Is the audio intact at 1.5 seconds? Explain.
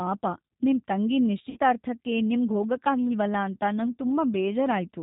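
No. Just after "ನಿಮ್ ತಂಗಿ", from 1.50 to 1.58 s, there is VoIP packet loss concealed by the speech codec. About 60 ms of audio went missing, consistent with two lost packets. The decoder filled the gap by extending its last pitch and filter with falling gain, stretching the sound into a buzzy tone or coloured noise that fades. On a spectrogram this appears as smeared, repeated harmonics, and the waveform shows a decaying envelope. Throughout the clip, plainly audible G.729 codec damage also leaves the speech rough and synthetic, with nothing above 4 kHz, so the spectrogram is blank above that line.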